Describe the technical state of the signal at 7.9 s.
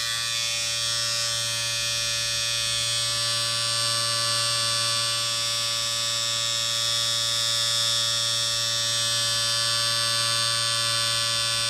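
Nothing is wrong with the signal at 7.9 s; it plays through that moment without any audible fault.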